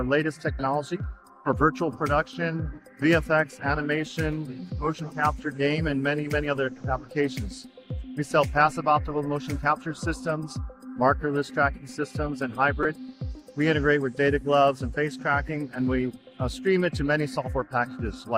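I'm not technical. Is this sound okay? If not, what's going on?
No. At about 12.83 to 12.85 seconds there is a corrupt frame decoded: one tiny chunk of the compressed audio was damaged, and the player played it anyway, producing a brief, fairly loud squeak or blip. A dropout would leave a silent gap instead.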